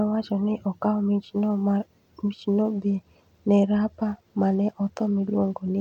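From 2.68 to 5.71 s the speech dulls and turns gritty: a Bluetooth SBC bit pool drop, likely from a congested link, thinning the upper sub-bands, consistent with bit pool falling from 28 to 13. On a spectrogram the treble above the reduced band empties out while granular noise fills the lower bands.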